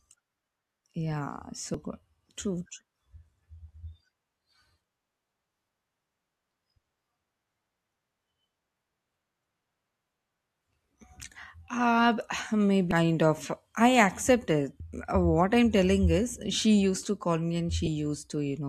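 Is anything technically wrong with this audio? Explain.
Yes. Damaged data in a compressed stream occurs at 1.74, 12.91, 14.80 and 17.86 to 17.88 s: corrupted bytes make the decoder misread frames, lose sync and hunt for the next header, leaving brief chirps or blips that cut across the speech.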